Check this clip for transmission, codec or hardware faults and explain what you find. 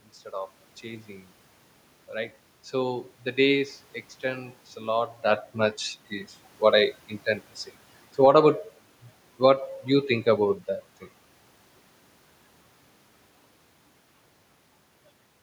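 One fault stands out, a hardware-side processing fault: automatic gain falling. From 5.26 s, just after "a lot", to 10.64 s, just before "that thing", the level sinks by about 3 dB. Having judged the input too loud or its background noise too strong, the gain control eases its gain down gradually, so the speech and the room noise beneath it drop together. That shared drop separates it from the talker moving at around 5 s, which changes only the voice. On a waveform, the envelope tapers steadily across that span, and on a spectrogram the speech bands and background floor dim in parallel.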